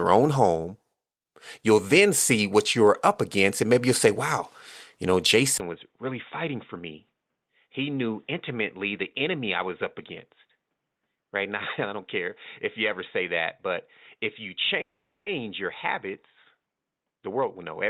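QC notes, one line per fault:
5.58–17.9 s, input switched to a poorer device: after "say wow you know", a 20 ms gap, then duller sound, about 10 dB quieter, likely a narrowband headset. The spectrogram shows nothing above 3.8 kHz and a new noise floor roughly 55 dB down.
14.81–15.28 s, call audio freeze: sound stalls into a brief fading buzz, then 430 ms of flat silence in the waveform. The cause is likely delayed packets, with 450 ms inserted, nothing lost and latency raised.
16.84–17.65 s, jitter buffer speed-up: about 200 ms of pitch periods trimmed, so speech runs at 121% speed and sounds hurried. The spectrogram shows compressed syllables with unchanged harmonic spacing.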